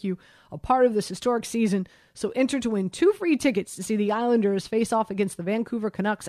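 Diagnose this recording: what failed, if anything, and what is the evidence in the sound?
Nothing failed: no stage in the chain, from capture through playback, leaves any audible evidence of a fault in this speech recording.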